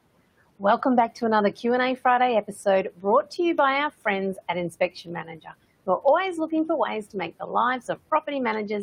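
From 4.71 to 5.47 s, speech is cut by the noise suppressor, which mistakes quiet speech for background and pulls it down by up to about 12 dB for around a fifth of a second in total. The dipping syllables sound swallowed, and the spectrogram shows faint, gapped energy there above room noise sitting about 23 dB below the speech.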